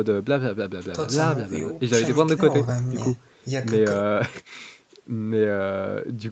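No technical faults are audible in this recording.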